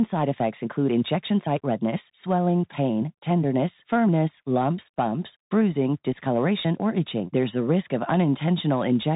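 Speech run through a Bluetooth CVSD headset codec for the whole clip: nothing gets past about 3.8 kHz, so it's boxy and narrowband, s sounds come out scratchy, and a grainy hiss sits underneath because the one-bit up-down coder keeps stepping up and down around the signal.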